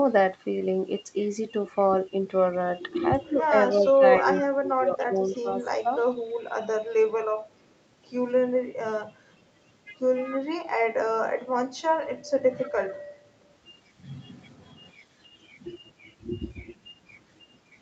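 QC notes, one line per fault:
3.27–5.91 s, 10.37–10.45 s, 11.06–11.37 s, 12.41–12.98 s, speech suppressed in double talk: the near talker repeatedly dips and breaks up in fragments, by about 20 dB in the first span (around a second of it affected in total), about 20 dB briefly at 10.4 s, about 25 dB at 11.1 s and about 15 dB at 12.4 s. This is likely the echo canceller mistaking simultaneous far-end talk for its own echo and attenuating everything.
3.85–4.40 s, 4.99–5.38 s, 5.97–6.34 s, 12.62–12.68 s, echo leak: a faint delayed copy of the voice trails the original by 285 ms. It sits at about 15 dB below the speech in the first burst, then about 30 dB and about 35 dB, and briefly resurfaces at about 25 dB down near 12.6 s. It is likely loudspeaker pickup on the far side that escaped cancellation and was sent back. The audio is band-limited to 8 kHz, consistent with Opus at a wideband setting.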